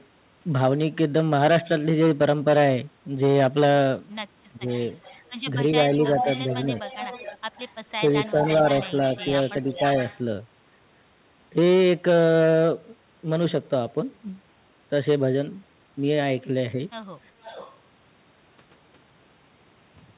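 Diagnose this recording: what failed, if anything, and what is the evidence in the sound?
The speech dips briefly from 4.53 to 4.68 s, by about 10 dB, and again between 7.99 and 8.64 s, by about 5 dB. This is speech suppressed in double talk, likely at the call-processing stage: the echo canceller could not separate its own talker from the loudspeaker echo and turned both down while both sides were talking at once.

A delayed copy of the speech trails behind the talker at 4.74 to 5.48 s (about 30 dB down), 6.07 to 7.74 s and 8.11 to 10.2 s (about 15 dB down), and 17.42 to 17.77 s (about 20 dB down). The copy arrives 408 ms late, then 442 ms late. This echo leak likely comes from a far-end loudspeaker whose canceller let residue through.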